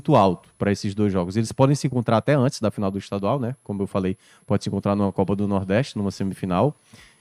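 A switching power supply somewhere in the recording chain is running in an audible burst mode or beating with another supply, and its switching tone leaks into the audio for the whole length of the speech. The result is a switching supply whistle: a thin, high whistle near 10 kHz, drifting between about 10.1 and 11.3 kHz. It sits roughly 40 dB below the speech.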